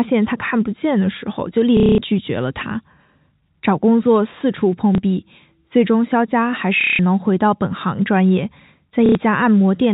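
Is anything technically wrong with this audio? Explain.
Yes. There is packet loss with the last packet repeated at 1.77 to 1.98 s, 4.95 s, 6.81 to 6.99 s, and 9.06 to 9.15 s, gaps of 210, 30, 180 and 90 ms. The receiver filled each gap by replaying the last good packet. The loops don't align with the pitch period. The longer runs buzz at roughly 33 Hz, which fits 30 ms packets, and sound like a brief robotic stutter within the 4 kHz telephone band of the G.711 coding.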